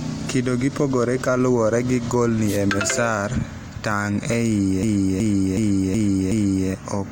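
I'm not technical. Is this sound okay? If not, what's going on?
No, there are two problems in this speech clip.

From 2.47 to 2.58 s there is a quick swish of static, a wireless microphone noise hit. The microphone sends its sound by radio, and for that instant the signal weakened because copies of it bouncing around the room cancelled each other out. The receiver's own hiss rose up briefly.

From 4.83 to 6.69 s the same short scrap of sound, about 0.37 s long, plays five times in a row, giving a skipping-record repeat roughly 2.7 times per second. This is a system hang loop: the computer froze for a moment while the sound hardware kept replaying the last piece of audio it had been given. Little or nothing seems to be skipped once it recovers.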